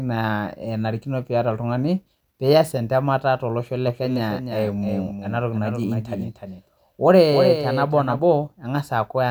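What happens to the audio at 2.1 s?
Nothing goes wrong at 2.1 s; the speech carries on intact through that moment with no dropout, click or distortion.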